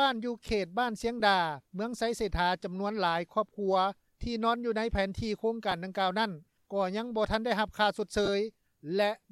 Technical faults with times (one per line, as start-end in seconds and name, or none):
1.20 lost LE Audio frames
5.71 lost LE Audio frames
8.25-8.28 lost LE Audio frames